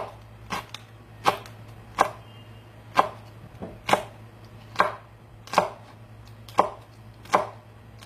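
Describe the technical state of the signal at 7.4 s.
At 7.4 s the signal carries HE-AAC compression damage, which runs through the whole clip rather than at that moment alone. The treble is likely rebuilt by spectral band replication: only the lower spectrum is truly coded, and copied lower bands are shaped by a coarse envelope to fill the top. The highs stay bright but don't match the harmonics below, so sharp, hissy parts sound gritty and metallic. The plainly audible damage points to a low bitrate, around 24 kbps.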